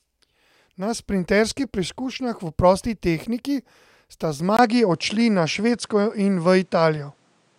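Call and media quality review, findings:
Speech turns duller from 4.57 s to the end, with a 20 ms gap at the switch, no content above 10.5 kHz, a faint new noise floor well below the speech and no obvious level jump. This is likely an input switched to a poorer device.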